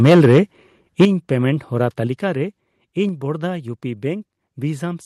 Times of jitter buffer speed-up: none

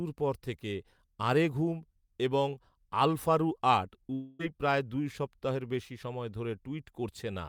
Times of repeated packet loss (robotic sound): none

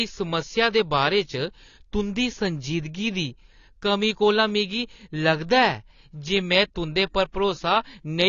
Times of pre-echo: 7.32-7.34

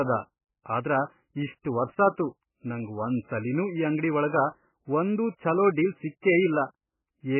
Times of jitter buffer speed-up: none

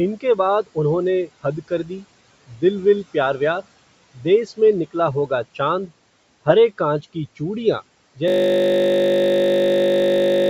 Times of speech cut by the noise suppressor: 1.68-2.05, 2.47-2.62

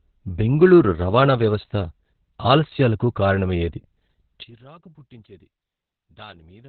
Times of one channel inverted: 4.43-6.68

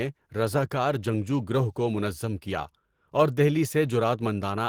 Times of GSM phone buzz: none

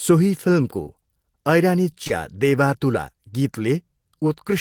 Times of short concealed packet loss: 0.83-0.97, 2.04-2.11

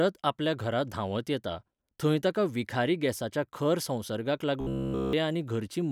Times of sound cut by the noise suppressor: none

